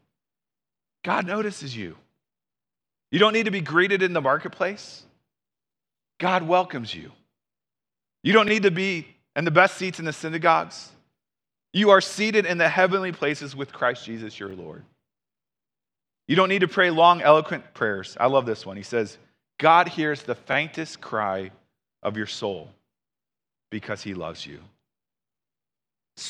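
At 2.46 s, just after "notices you", the speech stutters briefly. The same happens at 8.48 s before "to be in the", at 14.50 s, and at 20.53 s between "hears the" and "cry of your soul". These are overlapping chunks: each 6.0 s block begins about 21 ms before the previous one ended, so that sliver plays twice. The rigid 6 s spacing and the doubled rather than missing sound set it apart from dropouts or random clicks.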